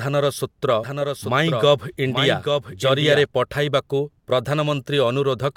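From 0.84 s to 3.26 s the speech runs twice at once, a doubled audio track with a second full-band copy trailing by about 0.7 s at roughly 5 dB down. It likely comes from a second, slower capture path. Unlike an echo, the copy has no decay or room colour, and it cuts in and out abruptly.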